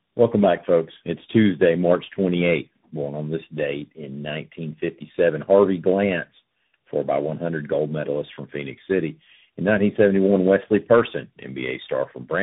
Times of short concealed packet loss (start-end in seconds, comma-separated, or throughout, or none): none